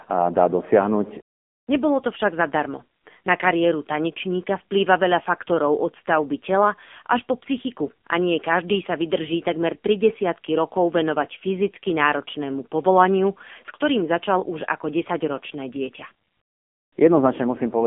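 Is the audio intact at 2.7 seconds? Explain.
No. The AMR narrowband mobile codec affects the whole recording, including 2.7 s. The speech passes through a 200 Hz to 3.5 kHz line band, and nothing above 3.6 kHz survives, so it sounds thin and muffled. The codec rebuilds each 20 ms frame from a vocal-tract model driven by a few pulses, and the heavy damage here, with a buzzy, synthetic edge, points to a low bitrate of around 6.7 kbps.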